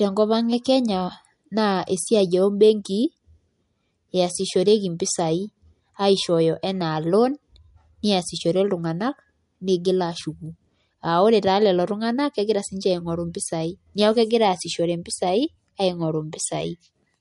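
Throughout, the speech likely went through heavy MP3 compression, consistent with a bitrate near 48 kbps: treble stops at 11.2 kHz, leaving a plainly watery, swirly texture.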